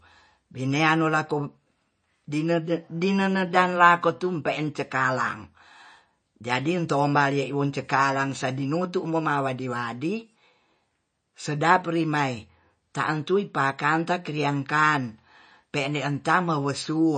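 Throughout the speech, the sound is watery, with nothing above 9 kHz. The likely cause is MP3 compression at a low bitrate, consistent with about 32 kbps.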